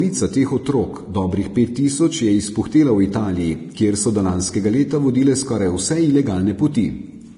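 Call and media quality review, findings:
Low-bitrate audio saved at a high bitrate, whole clip: speech has nothing above about 10.6 kHz plus dull detail and the first encode's artefacts. Likely a low-bitrate Vorbis-style encode re-saved as high-rate MP3; the bigger file can't bring back what the first pass removed.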